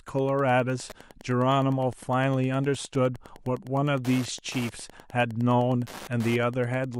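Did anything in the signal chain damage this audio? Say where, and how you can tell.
Yes. Wi-Fi interference enters at the analogue wiring and runs the whole length of the speech: a steady tick every 102.4 ms, about ten per second, sitting well below the speech. A nearby radio's beacon bursts are being rectified by the circuit. That exact spacing, rather than 50 or 60 Hz, separates it from mains hum or buzz.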